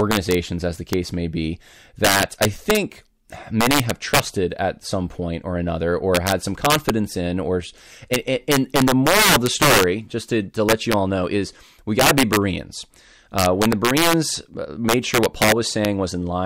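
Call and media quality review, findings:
Integer overflow throughout the speech: violent cracks on loud peaks, harsher than clipping. About 8 dB overdrive, roughly 1% of samples wrapping to opposite sign. Likely unclamped gain stage.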